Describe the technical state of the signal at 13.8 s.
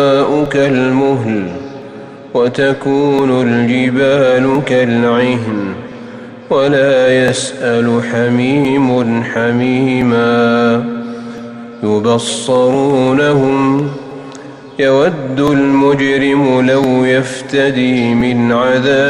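At 13.8 s a train of clicks is just ending. It runs from 12.56 to 13.80 s: about seven same-shaped pulses at a regular 5.7 per second, roughly as loud as the sound itself. The steady, even ticking sets it apart from random crackle, and likely comes from interference or a faulty connection or power supply.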